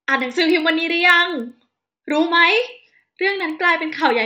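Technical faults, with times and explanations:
Throughout, resampler restarted on every block: a regular ticking at 10 per second sits under the speech and rides on the signal, so it is present only while there is sound. The audio was converted in separate 100 ms chunks, which fits a change from 16 kHz to 48 kHz. At each chunk edge the converter had no real neighbouring samples, so it filled in silence or the chunk's far end, leaving a small error at every boundary.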